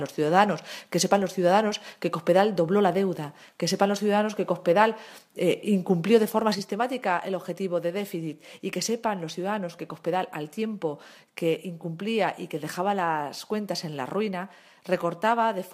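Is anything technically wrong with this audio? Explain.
Yes. From 6.55 s to the end, the sound drops abruptly by about 6 dB and stays there. That's likely one channel dropping out, halving the mono sum.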